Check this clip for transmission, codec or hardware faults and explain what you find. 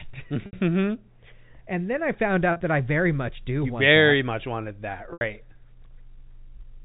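Three dropouts repaired by packet loss concealment with pitch repetition, at 0.46–0.53 s, 2.52–2.60 s (after "and then I found", before "that I very much") and 5.11–5.21 s (after "that much wanted that"). About 70, 70 and 90 ms of audio are missing. The later two losses are broken up, with runs of up to 40 ms and 80 ms. The receiver fills each gap by looping the last pitch period and fading it out, so the sound briefly holds on a buzzy, static tone. The longer 80 ms run at 5.1 s fades further toward silence before the speech cross-fades back in. The spacing fits 10 ms packets. The G.711 mu-law telephone path keeps everything below 4 kHz, with its faint level-following quantisation hiss.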